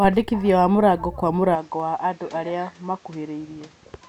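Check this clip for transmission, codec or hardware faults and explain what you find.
Two faults stand out, both in the later part of the speech.

From 1.55 s to the end, the sound abruptly turns duller, drops to roughly 5 dB quieter, and gains a faint new background noise sitting around 30 dB under the speech. There is no gap at the change. This is likely an input switched to a poorer device partway through recording, one with a narrower passband and its own noise floor and level.

At 1.80 s, a single sharp click cuts through, showing as a thin vertical line in the spectrum. The likely cause is dropped samples: a handful of samples, well under a millisecond's worth, went missing from the stream. The waveform jumps straight from one value to a later one, creating a tiny discontinuity. Too little audio is lost to be heard as a gap, so only the click remains.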